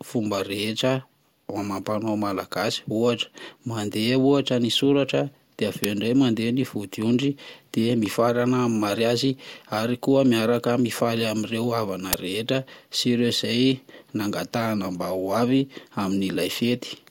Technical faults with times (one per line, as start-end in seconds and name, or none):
5.84 uninitialised buffer
12.13 uninitialised buffer